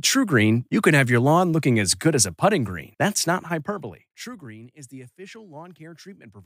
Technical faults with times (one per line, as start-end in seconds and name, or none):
3.20-4.50 zipper noise